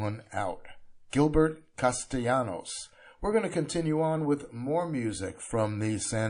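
MP3 compression runs throughout this speech clip, with plainly audible codec damage: weak frequency detail flickers from frame to frame, giving a watery, swirly texture, likely from an encoder starved of bits at a rate around 40 kbps. Pre-echo appears from 1.10 to 1.13 s, where a hiss about 15 dB above its surroundings runs for 28 ms ahead of a sharp attack. The quantisation noise was spread across a block of about 52 ms rather than confined to the attack, which fits the encoder never switching to short blocks there.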